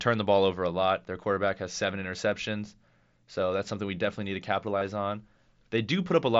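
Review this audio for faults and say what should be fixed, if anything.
Concealed Bluetooth headset packet loss at 2.04 s, after "quarterback has seven", and 4.79 to 4.81 s: the receiver filled missing headset packets by repeating recent matching waveform. Keep the headset close to the phone and away from Wi-Fi congestion to cut radio dropouts.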